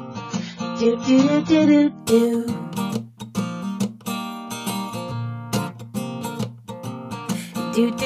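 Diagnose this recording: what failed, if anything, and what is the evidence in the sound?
The fault is an adaptive stream starting at a low bitrate, at the network and codec stage. From 0.0 to 2.0 s nothing is present above 7 kHz and artefacts are stronger, pointing to a very low bitrate. At 2.0 s quality jumps without a gap, as the player switches up.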